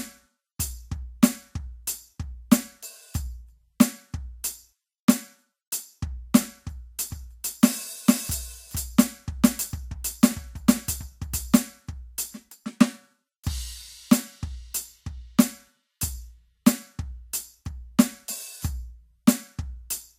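From 7.11 s to 11.57 s the music carries a doubled audio track: a second, equally loud full-band copy trails about half a second behind, with no decay or room colour, cutting in and out abruptly. Two out-of-step copies in the mix are the likely cause.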